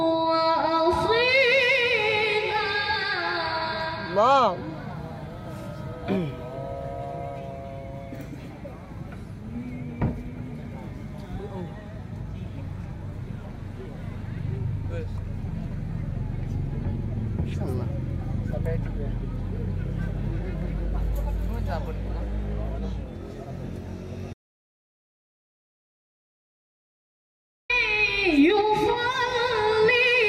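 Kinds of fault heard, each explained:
Audio dropout to silence: The sound cuts off at 24.33 s and returns at 27.70 s. The gap is silent with no room tone left, likely from lost input.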